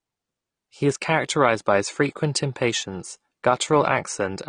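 From start to finish the speech sounds dull and smeared, with a fizzy, warbling edge on sibilants and sustained sounds and a clearly reduced top end. These are the marks of AAC compression, likely AAC-LC at a rate that fits about 32 kbps. With so few bits, the encoder quantises each frame's spectrum coarsely against its hearing model, dropping high bands and leaving gaps that turn into audible swirl.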